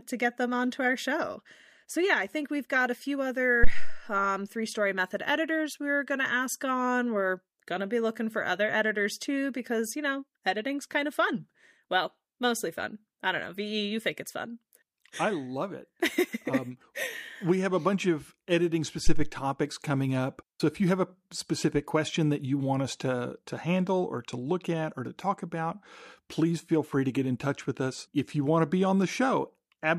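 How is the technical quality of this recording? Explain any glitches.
Two low thumps interrupt the speech. The first, from 3.64 to 4.06 s, falls after "we've got a few". The second, from 19.07 to 19.30 s, follows "a bunch of editing". These are phantom power thumps. A supply switched on a live input sends a voltage step through the coupling capacitors. Each peaks near about -6 dBFS, then about -10 dBFS, decaying within 96 ms and 51 ms.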